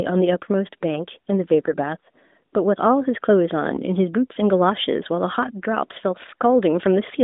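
Speech carried over a narrowband AMR mobile link, band-limited to roughly 200 Hz to 3.7 kHz with only light codec coloration, has a burst of AMR bit errors from 1.65 to 1.76 s. For about a tenth of a second, which fits roughly five 20 ms frames, the voice keeps its pitch and level but turns scratchy and gargly. This points to a weak radio link flipping a couple of percent of the less-protected bits, which misplaces the excitation pulses and corrupts the fine pitch, gain and spectral parameters.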